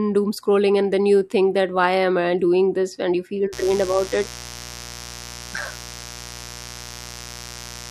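From 3.53 s to the end of the speech, a steady, raspy mains buzz sits under everything. Sharp switching spikes, twice per 60 Hz cycle, leak into the signal. Their harmonics climb into the kilohertz range. The buzz stays about 15 dB below the speech.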